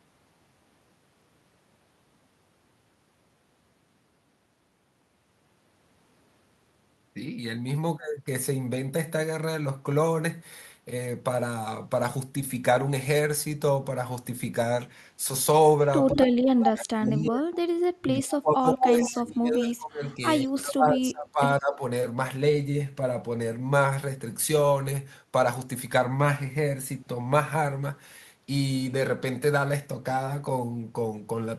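An echo canceller on the call was likely unable to tell the local talker from loudspeaker echo while both sides spoke at once, so this speech clip shows speech suppressed in double talk. It clamps the voice down at 16.1 to 17.67 s, 18.05 to 20.2 s, 20.42 to 21.4 s and 21.59 to 21.82 s, with the level falling by as much as about 30 dB and the voice dipping or breaking into pieces, roughly 4.7 seconds in all. The same canceller also likely let some loudspeaker pickup slip through, producing echo leak: a delayed copy of the voice, 158 ms behind, surfaces in short scraps at 16.14 to 16.27 s, 16.43 to 16.65 s, 17.05 to 17.12 s and 19.04 to 19.11 s, sitting about 10 to 15 dB below the direct speech and sounding like a repeat tucked under the suppressed passages.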